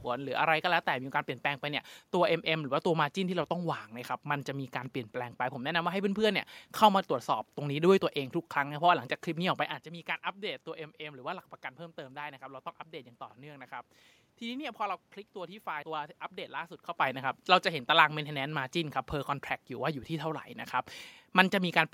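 No technical faults are audible.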